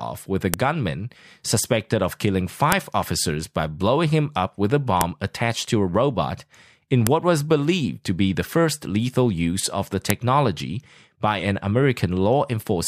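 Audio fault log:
0.54, 2.72, 5.01, 7.07 and 10.10 s: file header played as audio. A sharp, loud click snaps out at each point, regardless of the speech around it. Separate pieces were joined with their WAV headers intact. Those header bytes play back as a brief burst of raw samples.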